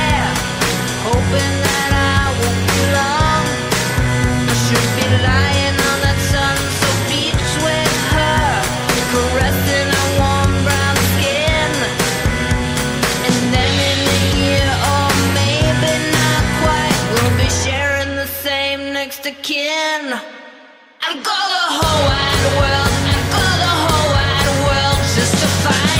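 No technical faults can be heard anywhere in the clip. Nothing in the audio points to a problem in how it was captured, processed or delivered.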